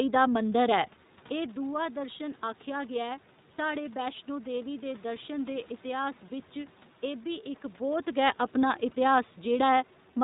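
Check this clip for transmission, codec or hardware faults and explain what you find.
One codec fault runs through the whole clip: the speech has passed through the iLBC codec. From start to finish, each 20 ms frame is coded on its own, without drawing on the frame before, at a rate that fits iLBC's 15.2 kbps mode. The narrowband path also removes everything above 4 kHz. The damage is plainly audible as dull, muffled speech with a rough, slightly synthetic edge. The level shifts near 1 s and 7.5 s come from the talker moving, and the background noise is room noise rather than a system fault.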